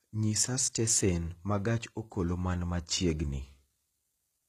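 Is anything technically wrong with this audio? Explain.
Yes. Throughout the speech there is plainly audible HE-AAC compression: s sounds turn gritty and lispy, likely because spectral band replication rebuilds the treble by copying lower bands upward. The damage fits a bitrate near 20 kbps. On a spectrogram the treble looks coarse and misaligned, with nothing above 14.9 kHz.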